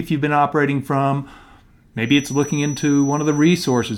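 From 2.0 s to the end of the speech, a feedback whistle appears. A thin, steady tone near 5.9 kHz sits well below the voice, swelling and fading slowly in level. The likely cause is a loudspeaker-to-microphone loop held just at the edge of feedback.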